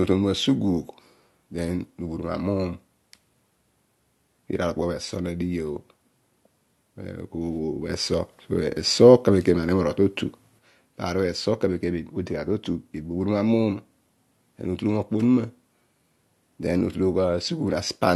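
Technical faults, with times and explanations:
7.9–10.59 s sudden gain jump: speech and background noise rise together by about 5 dB instantly, then fall back at 10.59 s, likely a gain change applied without a ramp. Unlike automatic gain control, the level neither glides nor follows the speech.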